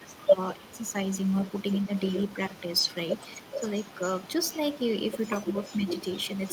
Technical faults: speech suppressed in double talk; echo leak

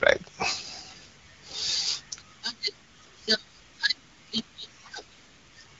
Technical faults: none

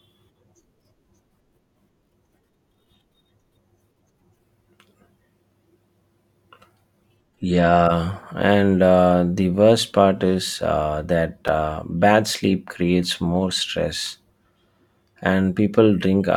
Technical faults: block of digital silence

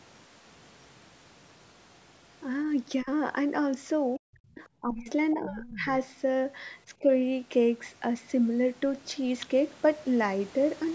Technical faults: speech suppressed in double talk; other side's voice leaking through

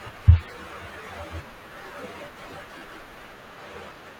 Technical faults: compressed frames skipped; repeated buffer

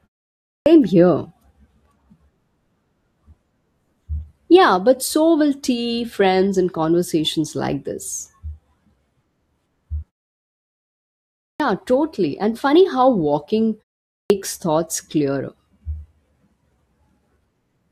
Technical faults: clipped start after a pause

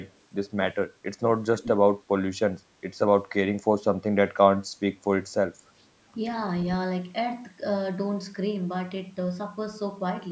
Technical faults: echo leak

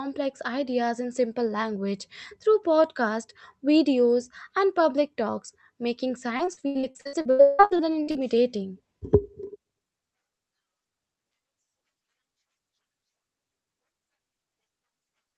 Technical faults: repeated packet loss (robotic sound)

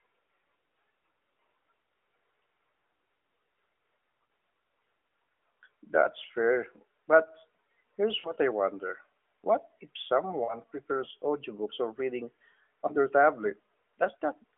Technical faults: lost AMR speech frames

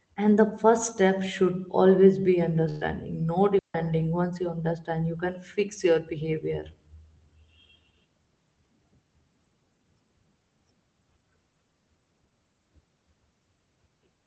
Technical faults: burst of packet loss; digital wireless dropout

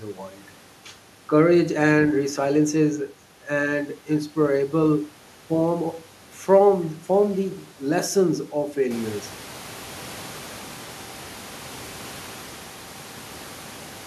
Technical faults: none

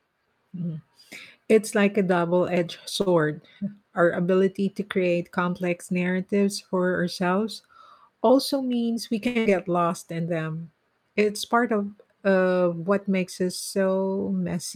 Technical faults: short stall from a late packet; jitter buffer speed-up; burst of packet loss; jitter buffer slow-down

